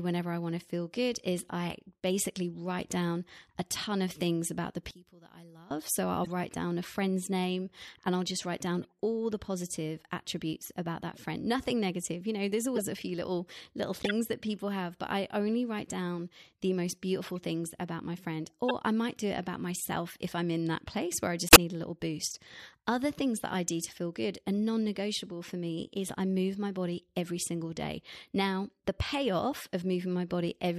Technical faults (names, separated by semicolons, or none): one channel inverted; corrupt frame decoded